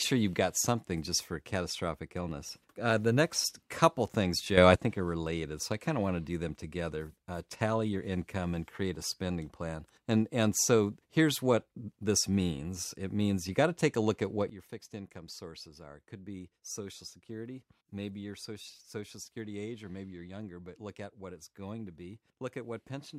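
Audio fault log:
4.58–4.76 s, sudden gain jump: after "the next couple things", speech and background noise leap about 8 dB together, then snap back by "think are related so". The likely cause is a gain change applied without a ramp. The noise moving in step rules out a louder talker.
14.50 s to end, sudden gain jump: after "a look at what", level and noise floor drop about 12 dB instantly and stay down. This is an abrupt step, not a gradual fade.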